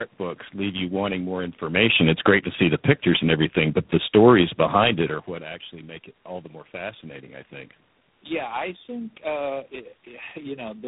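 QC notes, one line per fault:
Throughout: tandem speech coding. The sound is rough, muffled and warbly, the result of about three speech coders in a row, each re-coding the last one's damage. On a spectrogram, nothing appears above 3.8 kHz, and the harmonics look smeared and blotchy.
1.62–4.92 s: automatic gain falling. The gain control judged the input too loud or its background noise too strong and pulled its gain down gradually by about 9 dB, so the voice and the room noise sink together. The waveform envelope and the noise floor taper downward across this span.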